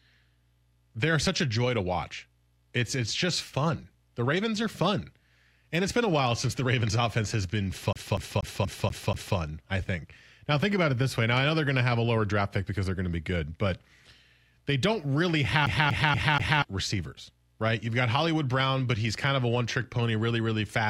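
A CD stuck on one turn interrupts this speech clip twice, from 7.93 to 9.37 s and again from 15.66 to 16.62 s. A scratch keeps knocking the laser back one track, so a 240 ms slice repeats six times, then four, each jump marked by a brief mute.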